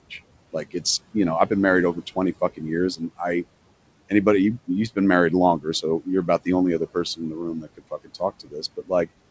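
Noise suppressor artifacts run through the whole clip. The suppressor estimates the steady room noise and pulls those bands down by about 21 dB frame by frame, so the background drops away in the gaps and returns underneath the speech. On a spectrogram the noise floor pumps between near-empty pauses and grainy, patchy speckle around the speech energy, all inside the band that stops at 8 kHz.

Speech cut by the noise suppressor comes right after "about the only other", from 7.16 to 8.21 s, and again from 8.40 to 9.08 s. In each stretch the suppressor mistook quiet parts of the speech for noise and turned them down by up to about 19 dB, roughly 400 ms in the first and 300 ms in the second. Consonants and word endings sound swallowed. In the waveform the envelope sinks, and the spectrogram shows those syllables thinned to faint traces.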